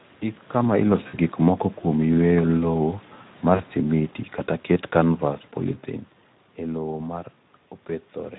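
Speech here has a hoarse, grainy, noisy texture throughout, the signature of the Speex codec starved of excitation bits, which fits a Speex mode around 11 kbps. VoIP packet loss concealed by the speech codec produces brief buzzy or noisy smears that fade and leave the voice weak: at 1.08 to 1.16 s just before "gik moko kuom yweyo", at 3.55 to 3.62 s before "simiti kata ket kanvas", at 5.71 to 5.75 s, and at 7.71 to 7.73 s right after "e lowo ma". In each case the decoder stretched its last pitch and filter across the missing audio, fading it out gradually.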